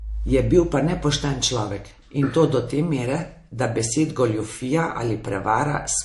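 Speech with plainly audible MP3 compression throughout: swirly, watery sibilants and a hard treble cut at 11.3 kHz, a flat spectrogram ceiling, which fits a low bitrate near 48 kbps, likely from MP3 encoding.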